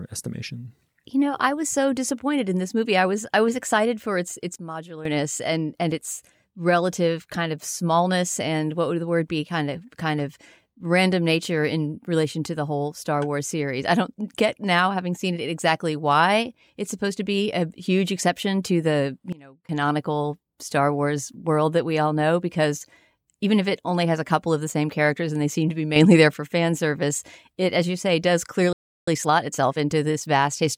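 At 4.56 s the level suddenly drops about 12 dB, speech and background together, until 5.05 s. That's a sudden gain jump, likely a gain step applied without any ramp. It happens again after "huge exception to the", falling about 22 dB from 19.33 to 19.69 s, and at 25.96 to 26.34 s it goes the other way, up about 6 dB. Right after "as you say does", at 28.73 s, the audio cuts out for about 345 ms. That's a playback stall, likely the player starving for data or its thread getting blocked. When it comes back at 29.08 s there's time-compressed catch-up until 30.72 s. The speech runs about 1.15 times fast at normal pitch, because small pieces are being cut and cross-faded out to work off the backlog.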